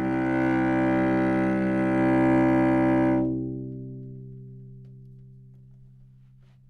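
No technical faults are audible.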